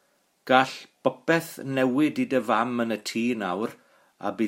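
Listening to this speech recording, nothing stood out as a technical problem at any point.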